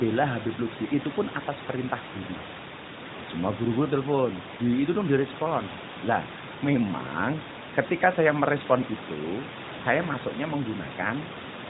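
No technical faults can be heard anywhere in this speech.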